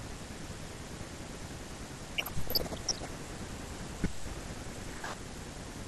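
Weak reception let bit errors slip past the error correction into the MP2 data from 2.17 to 3.08 s, around half a percent, enough for dozens of frames. This is DAB burbling: corrupted samples put short blips of noise into single sub-bands and corrupted scale factors make sub-bands jump in level, so the speech picks up short blips of noise.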